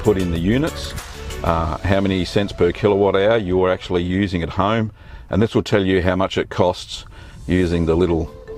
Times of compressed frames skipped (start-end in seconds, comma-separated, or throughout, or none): none